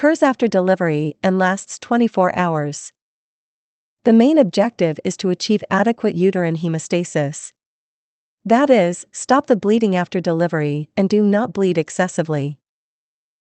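No faults heard in this speech; the band-limiting at about 8 kHz is simply the call codec at work, consistent with a modest-bitrate Opus path.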